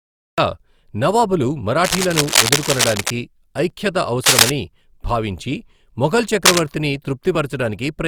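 Cut-off start at 0.38 s: the speech recording opens with digital silence from 0 to 0.38 s, then the sound appears abruptly mid-utterance with no natural attack, because capture began after the talker was already speaking. Low-bitrate audio saved at a high bitrate runs throughout. The file is a 320 kbit/s MP3, yet it carries the coding artefacts of a much leaner earlier encode, likely Opus at around 48 kbit/s, with nothing above about 20.1 kHz. Re-encoding at a generous bitrate cannot restore detail the first pass discarded. Cable scratch noise appears at 1.83–3.10 s, 4.24–4.50 s and 6.45–6.62 s as dense, uneven rustling bursts over the speech, roughly as loud as the speech in the first burst and somewhat louder in the later two. The likely cause is a worn cable or connector being moved, its contact resistance fluctuating rapidly.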